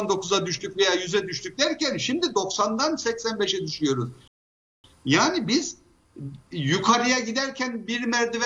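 At 4.28 s the audio stops dead and stays silent until 4.84 s, a rebuffering stall lasting about 0.56 s. The player exhausted its downloaded buffer and halted playback until more data arrived. When the sound returns it picks up at exactly the point where it broke off, so no material is skipped or repeated. The gap simply inserts 564 ms of extra time into the timeline.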